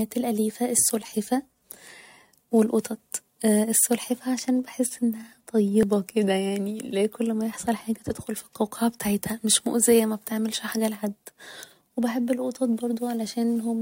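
At 5.83 s, just before "كده يعني اللي هي", an overlap between stream segments trims a few milliseconds at a 2-second segment boundary, causing a tiny skip with no gap of silence.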